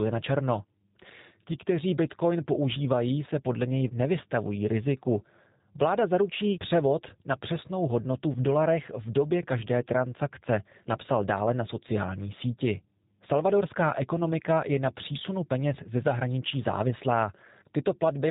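Throughout, the speech carries plainly audible G.729 codec damage. Nothing above 4 kHz survives, and the sparse pulse excitation sounds rough and synthetic, fitting 8 kbit/s coding.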